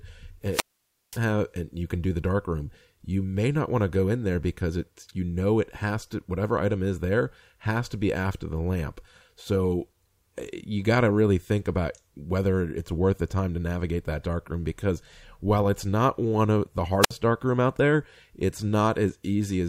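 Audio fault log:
0.50 to 1.19 s and 17.01 to 17.12 s, wireless microphone squelch dropout: the radio link fades, hiss swells, then the receiver's squelch cuts output to near silence for 0.53 s and 60 ms.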